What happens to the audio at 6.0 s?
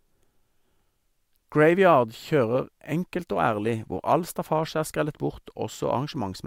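Nothing goes wrong at 6.0 s; the speech plays through that moment intact, with no dropout, click or other fault.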